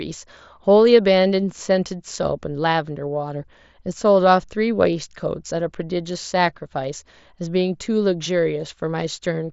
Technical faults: none

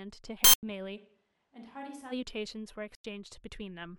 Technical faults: corrupt frame muted; switch to a distant microphone

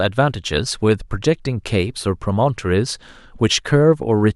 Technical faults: none

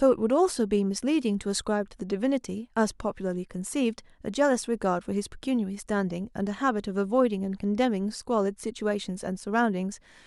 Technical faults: none

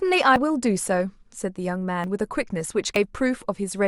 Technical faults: dropped buffer (overrun)

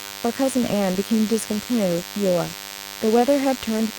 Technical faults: DECT cordless phone buzz

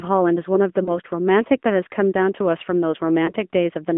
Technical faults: AMR narrowband mobile codec; lost AMR speech frames

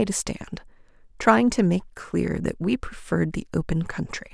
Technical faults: none

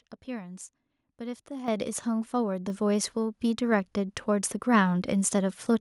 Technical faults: microphone volume stepped up

